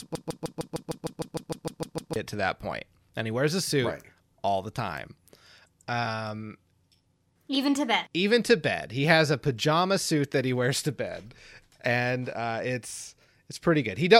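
A broken-record loop runs from 0.0 to 2.16 s, already under way when the speech begins: a 0.15 s fragment repeats exactly, back to back, about 13 times, giving a stutter. The likely cause is a stalled player or stream resending its last buffered piece, so the intended audio there is lost.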